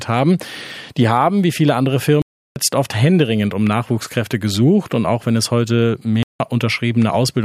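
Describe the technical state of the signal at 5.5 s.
At 5.5 s the signal is intact, with no dropout, distortion, glitch or other fault audible at that point.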